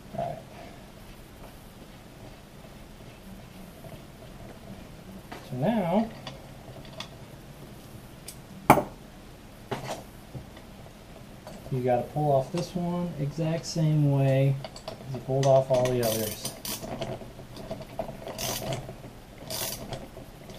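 No technical faults can be heard anywhere in the audio, so there is nothing to describe in time order.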